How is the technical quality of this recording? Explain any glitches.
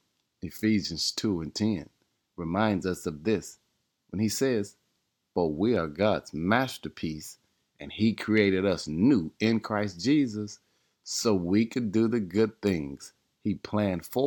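No glitches can be heard anywhere in this speech recording. There is nothing to explain, since the audio runs without any audible interruption or fault.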